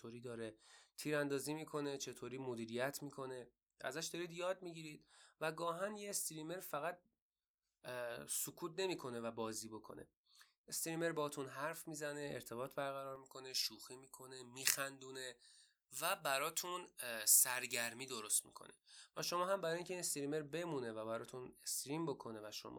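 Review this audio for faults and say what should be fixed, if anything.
From 13.16 to 19.19 s the speech turns thin, bright and sibilant: pre-emphasis left on. The treble boost, shaped like the J.17 curve, was applied without the matching de-emphasis, leaving high frequencies about 11 dB too strong at 10 kHz relative to 1 kHz. Applying the complementary de-emphasis to that section would restore the balance, and confirming that every emphasis stage has its paired de-emphasis in the signal chain would prevent it.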